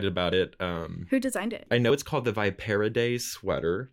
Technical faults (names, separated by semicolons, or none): dropped buffer (overrun)